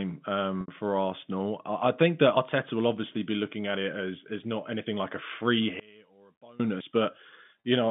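At 0.61 s there's packet loss with pitch repetition: about 70 ms went missing, and the receiver papered over it by looping the last pitch period. You hear a brief held, buzzy stretch until 0.68 s, then the speech carries on.

At 2.37 s the sound jumps ahead, with nothing silent in between. That's most likely a dropped buffer (overrun), roughly 70 ms skipped, because the samples weren't collected before the hardware overwrote them.

From 5.80 to 6.60 s the speech sinks by about 28 dB and turns faint. That points to one channel inverted: the centred content cancels when the two sides sum to mono, leaving only their difference.

At 6.80 s there's another jump, likely from a dropped buffer, around 50 ms this time.

Then at 7.60 s a 40 ms gap gets the same pitch-repetition fill, a short buzzy hold ending at 7.64 s.

Throughout, the narrow telephone band of the G.711 line is audible.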